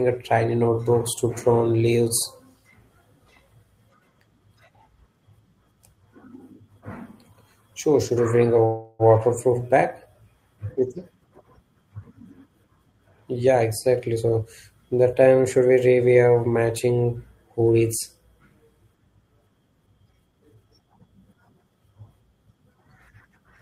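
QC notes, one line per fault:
8.65 to 9.02 s, call audio freeze: packets were most likely held up in transit and the jitter buffer ran dry, so the receiver stretched the last sound into a fading buzz or hiss for about 0.34 s. When the packets came in, playback resumed where it had stopped, so nothing is lost, but a 0.34 s pause sits in the speech and everything after it plays later by that amount.
13.33 to 14.43 s and 19.81 to 21.00 s, jitter buffer speed-up: the buffer had built up more audio than its target, and the receiver trimmed it by repeatedly cutting out short pitch-period slices. Speech plays at about 110% speed in the first stretch and 116% in the second, dropping roughly a tenth and a fifth of a second. Pitch stays put, but delivery sounds rushed.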